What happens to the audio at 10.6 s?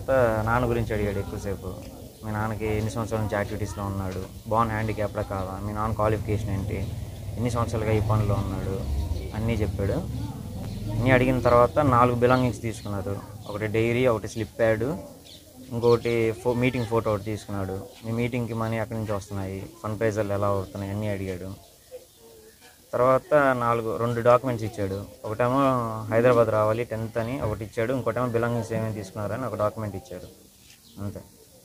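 Between 10.64 and 10.66 s the audio briefly jumbles: a tiny stretch plays in the wrong order, giving a scrambled, garbled instant. This is chunks out of order. One chunk of about 11.61 ms arrived one chunk late and plays after the chunk meant to follow it. Nothing is missing, but the swap leaves three hard joins where the waveform no longer lines up.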